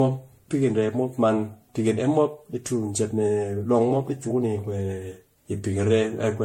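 Generation loss throughout the speech: swirly, hollow smearing, blurred attacks, nothing above 16.5 kHz, likely from about seven MP3 re-encodes near 64 kbit/s compounding quantisation noise.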